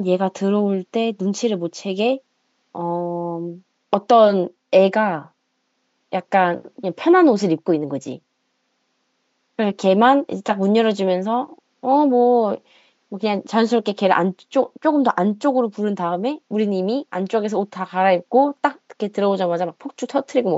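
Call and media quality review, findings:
No faults found in the speech; room noise sits about 51 dB below the talker, which is the room's own background and not the system.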